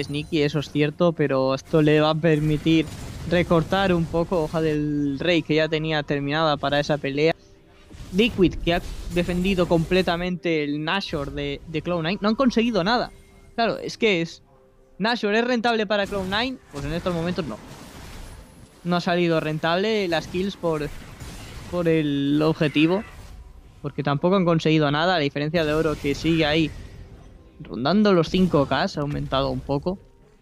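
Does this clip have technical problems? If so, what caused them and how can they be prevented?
Yes, there are compressed frames skipped at 7.32 s: roughly one frame, about a tenth of a second, goes missing, which fits a 93 ms codec frame. Verify file integrity and use error-resilient transport to prevent it.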